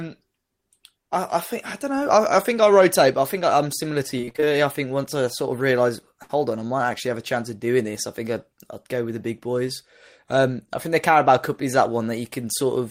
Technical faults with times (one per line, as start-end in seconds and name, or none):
4.17-4.53 repeated packet loss (robotic sound)
6.23-6.31 burst of packet loss